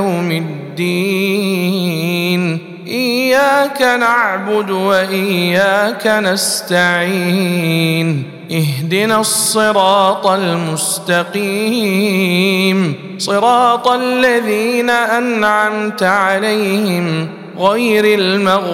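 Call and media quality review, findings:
Hard clipping, throughout: signal driven about 5 dB past a gain stage or converter ceiling, peaks cut flat. Only around half a percent of samples affected, so crackle on loud peaks rather than constant fuzz; flat tops add high harmonics.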